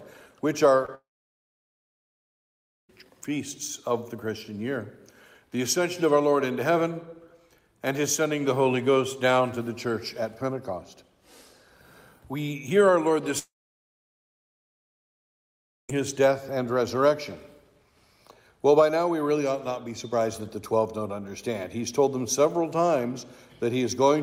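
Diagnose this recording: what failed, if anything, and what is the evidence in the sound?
Short concealed packet loss at the network stage, at 0.85 to 0.89 s: about 30 ms never arrived, and the decoder bridged it by extending the preceding sound before blending back. On a spectrogram that strip shows a smeared, repeated texture with no fresh onsets. The waveform shows a brief, unnaturally regular segment.

The sound then cuts out twice, most likely from a long network dropout: 0.95 to 2.90 s (about 1.9 s) and 13.39 to 15.90 s (about 2.5 s). Each gap opens with a short concealment tail that fades, then sits near silent for about 1.9 s and 2.4 s. The waveform goes near-flat, and the spectrogram shows empty columns. The audio resumes without the lost stretch.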